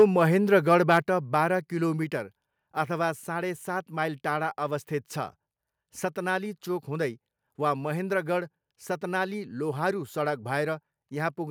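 From 0.00 to 0.04 s, and again from 0.72 to 0.97 s, the loudest speech peaks turn harsh and crackly, likely from microphone overload: input about 2 dB and then about 3 dB beyond the converter's limit, flattening the waveform tops. The opening burst clips a large share of samples, the later one only a small fraction. The distortion rides only on the peaks, unlike steady codec noise.

At 1.02 s the microphone volume steps down: speech and background fall together by about 4 dB in one abrupt step, just after the distorted peak, rather than gliding like a fade or chopping like a noise gate.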